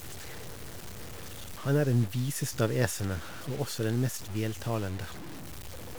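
From start to end, the speech carries grainy distortion that shifts with it. Quiet sounds turn gritty. This is likely low bit depth without dither, roughly six-bit truncation, with error near -15 dB.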